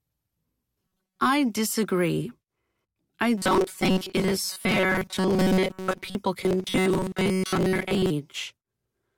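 From 0.82 to 1.19 s, again from 3.38 to 6.16 s, and from 6.41 to 8.10 s, the speech takes on robotic sound from repeated short buffers: a rigid metallic buzz fixed at 188 Hz that only loosely tracks the words. The likely cause is audio arriving too slowly, so a fragment of about 5.3 ms is replayed to fill most of each stretch while the real signal is dropped, imposing that steady pitch.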